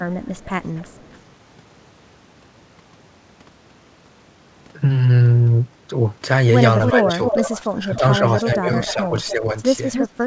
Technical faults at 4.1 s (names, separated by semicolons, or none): none